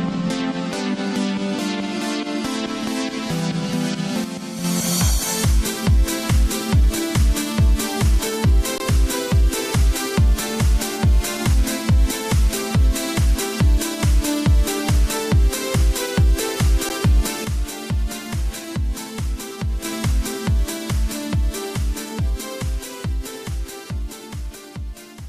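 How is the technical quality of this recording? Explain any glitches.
The recording has two kinds of glitch: two drops in level that point to a lost stereo channel, and two brief underruns where the output held still.

From 4.24 to 4.64 s and again from 17.45 to 19.85 s, the level falls abruptly by about 6 dB and then returns. The tone and balance stay the same; only the loudness changes. That pattern is most likely one channel dropping out: with the same material on both sides, losing one halves the mono sum, which shows up as a 6 dB step.

At 8.78 to 8.80 s (a 20 ms gap) and at 16.89 s (about 11 ms), the sound briefly stops and the waveform goes flat. These are underruns with a held sample. The output buffer ran empty, and the converter kept repeating its last value until new data arrived. Almost no audio was lost, so playback resumes where it paused rather than jumping ahead.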